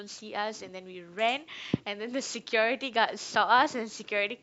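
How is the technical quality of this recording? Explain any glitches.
No technical glitches can be heard anywhere in the recording, and the signal holds steady throughout.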